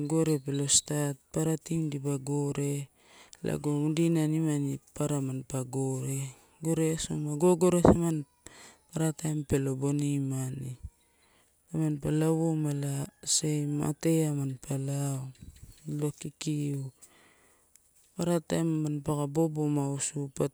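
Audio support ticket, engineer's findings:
Engineer's findings: no fault found in the speech audio attached to this ticket.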